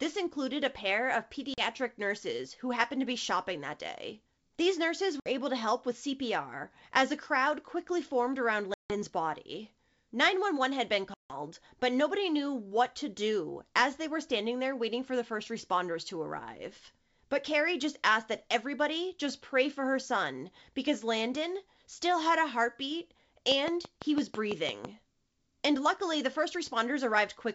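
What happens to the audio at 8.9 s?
Speech breaks off in a hard-edged silent hole from 8.74 to 8.92 s, packet loss on an ADPCM call, with about 160 ms missing across several packets. Unlike a plain dropout, the sound resumes slightly distorted, because the decoder's predictor and step size have drifted from the sender's, and it settles within some tens of milliseconds.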